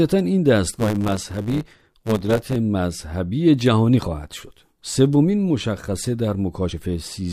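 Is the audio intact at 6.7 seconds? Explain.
No. At 6.71 s, compressed frames were skipped: about two frames of about 23.2 ms each were missing or rejected by the decoder. The audio jumps ahead by roughly 50 ms.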